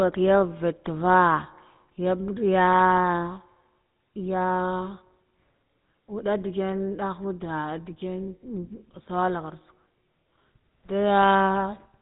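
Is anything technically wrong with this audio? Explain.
Yes. The speech carries GSM full-rate codec damage from start to finish, and it is plainly audible. This early mobile codec models the vocal tract as a filter. It excites that filter with regularly spaced pulses and keeps only every third excitation sample. The result is a buzzy, gravelly roughness over the whole clip, which fits a 13 kbps stream. Nothing is passed above 4 kHz, so the top end is missing throughout.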